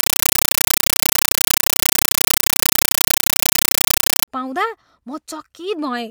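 From 0 to 4.28 s the compressed stream is played as audio: the receiver treats an undecoded Dolby Digital (AC-3) bitstream as ordinary samples. Each 8 ms noise burst, repeating 31.25 times a second, becomes very loud, chattering static in place of the speech.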